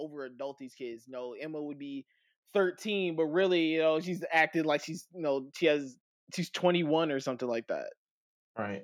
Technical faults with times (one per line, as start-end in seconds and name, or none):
0.05-5.90 automatic gain rising